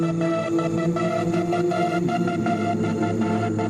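Gain pumping runs throughout. The level dips a few decibels under each loud sound, likely from an overdriven limiter. The waveform envelope visibly breathes.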